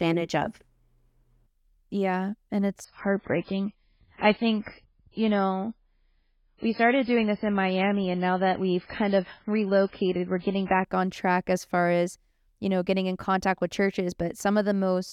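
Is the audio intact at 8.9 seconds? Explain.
No. At 8.9 seconds the speech sounds dull and smeared, with everything above about 5.3 kHz missing and a grainy, watery codec texture, as though a switch flipped abruptly with no gap. This is an adaptive stream at a lower bitrate, running from 2.85 to 10.85 s: the player fell back to a cheaper encoding while the connection slowed, and the sound fits a drop from 128 to 16 kbit/s MP3. The drop begins just before "on track as far".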